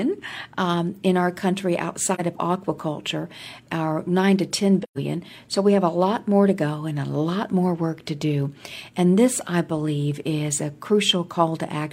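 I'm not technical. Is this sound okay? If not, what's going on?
No. AAC frame loss with muting at 2.14–2.20 s and 4.83–4.98 s: missing chunks of compressed speech were replaced by brief, gently faded silences, the second longer.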